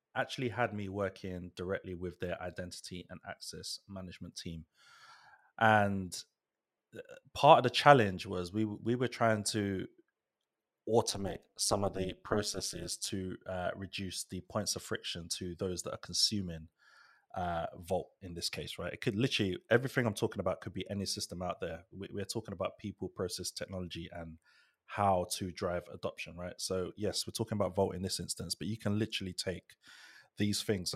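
A speech recording whose frame-based processing reassembles its windowed frames with an overlap that fails to sum to constant gain, producing overlap-add ripple from 11.09 s to 13.1 s. Each frame boundary pulls the level down by about 60 dB before it recovers. Because this dip repeats at the frame rate of around 200 Hz, the sound takes on a harsh, metallic buzz through those two seconds.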